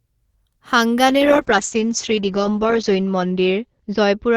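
A call bitrate drop hits this speech clip at 1.09 s and lasts to the end. The encoder, told its bandwidth had shrunk, starts coding far more coarsely. The sound turns rough and muffled, and the top end is cut from about 20 kHz down to 8 kHz, which points to a fall from roughly 32 kbps to 8 kbps. The worst stretch lasts 1.78 s, and quality never recovers before the audio stops.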